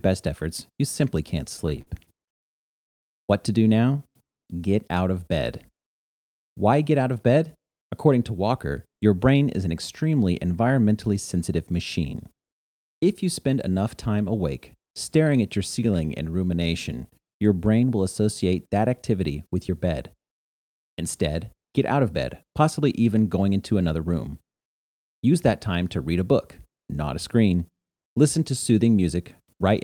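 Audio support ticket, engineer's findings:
Repeated stalls (stutter), 1.49–2.44 s: 11 gaps filled with 250 ms of continued sound, longest 98 ms, about a quarter of the span. Jitter buffer underrun. Drags rather than drops, since nothing is lost.

Jitter buffer slow-down, 3.81–4.59 s (85% speed, 122 ms added) and 15.80–17.35 s (92%, 136 ms added). Repeated pitch periods refill the buffer. Pitch stays put, unlike clock drift.

Jitter buffer speed-up, 6.55–7.79 s (108%, about a tenth of a second cut), 9.05–9.35 s (111%, a few tens of ms) and 19.30–22.82 s (107%, roughly a third of a second). Pitch periods are trimmed to shed excess delay. Hurried but same pitch, with no gaps.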